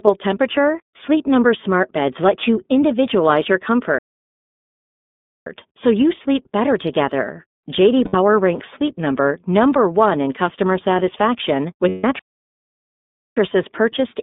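The whole clip of speech carries iLBC codec damage that is plainly audible. The spectrogram shows energy confined to a band of roughly 200 Hz to 3.6 kHz, with nothing above 4 kHz, and the voice has the rough, slightly synthetic edge of excitation coded frame by frame. The frame structure and rate point to the 30 ms mode at about 13.33 kbps.

From 3.98 s to 5.47 s the sound stops in mid-flow for about 1.48 s, a playback stall. The waveform collapses to a flat line and the spectrogram shows a blank vertical column before the speech picks up again. The likely cause is that the player ran short of data or its thread was blocked until it recovered.

At 8.05 s to 8.15 s there are lost iLBC frames. About 90 ms, which fits three 30 ms frames, is replaced by a held, buzzy, vowel-like sound as the decoder repeats the last pitch cycle mixed with noise. On a spectrogram this appears as a short stretch of unchanging harmonic stripes, and the speech is clean again straight afterwards.

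A longer loss follows at 11.89 s to 12.04 s. About 150 ms, consistent with five frames, becomes the same sustained buzz, fading in level across the gap.

Almost immediately, from 12.19 s to 13.37 s, a second stall silences the output for about 1.17 s, again showing as a flat waveform and an empty band in the spectrogram.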